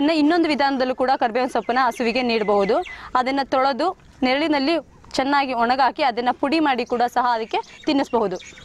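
No technical faults can be heard anywhere in this audio.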